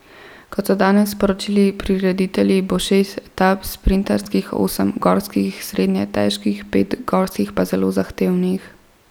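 At 4.24 to 4.26 s, just before "osem gorskih srednje težkih", the speech hits a repeated buffer. Fresh audio failed to arrive in time, so the output replayed its last block of about 10.7 ms, which fits a 512-sample buffer, two extra times. The result is a brief buzzy stutter with hard joins, and roughly 20 ms of real speech never plays. On a waveform, identical short segments sit side by side with abrupt steps at each seam. A spectrogram shows thin vertical broadband lines at the joins.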